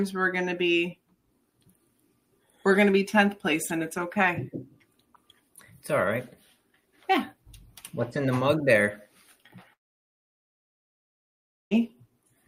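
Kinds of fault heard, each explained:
Long network dropout: from 9.73 to 11.73 s the sound cuts out for about two seconds. A brief fading trace of the last sound gives way to near-silence until playback resumes, likely because a run of packets never arrived, leaving that stretch missing.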